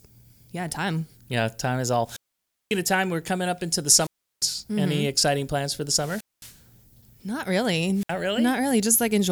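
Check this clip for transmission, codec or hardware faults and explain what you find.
The speech has a wireless microphone squelch dropout four times: 2.04–2.80 s after "time is" (about 0.55 s mute), 3.95–4.49 s after "coming up into the" (0.35 s), 5.88–6.62 s after "exciting plans for the" (0.22 s), and 7.93–8.15 s (64 ms). Each time the FM link fades, static rises, the receiver's squelch cuts to near silence, and the voice returns.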